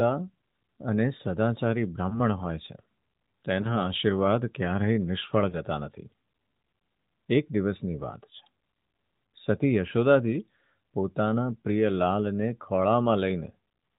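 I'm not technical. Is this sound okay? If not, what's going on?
No. Lost AMR speech frames cause three quick blips, at about 2.1, 3.6 and 5.5 seconds. Each sounds like one damaged slice of about 20 milliseconds. The phone's decoder patched it by repeating the previous sound more quietly, giving a brief dip or warble.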